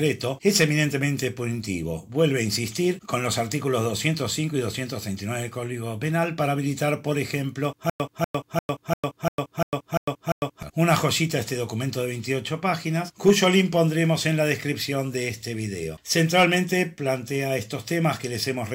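A stutter with silent gaps runs from 7.90 to 10.63 s: a 0.24 s fragment repeats eight times, each followed by 0.10 s of digital silence, likely a stalled stream replaying its last buffer. The waveform shows identical blocks separated by flat silent stretches.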